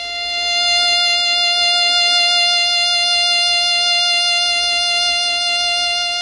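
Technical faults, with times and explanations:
Throughout: MP3 compression, likely at a low bitrate near 40 kbps; treble stops dead above 10.6 kHz, and starved frequency lines flicker, giving plainly audible watery, swirling music.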